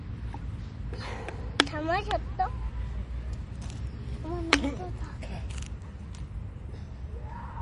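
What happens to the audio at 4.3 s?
At 4.3 s the sound is dull and watery, with a swirl and metallic chirping on its brighter parts and softened attacks. Nothing is present above 10.6 kHz. This is MP3 compression, present from start to finish rather than only at this moment, and the damage is plainly audible. The likely cause is an encoder short of bits, which fits a low bitrate around 40 kbps. To save bits, it cut the treble at a fixed frequency and dropped weak frequency lines that flicker on and off between frames.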